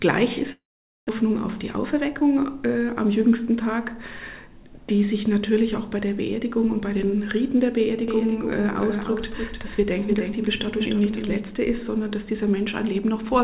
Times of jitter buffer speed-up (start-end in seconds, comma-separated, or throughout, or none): 1.23-3.13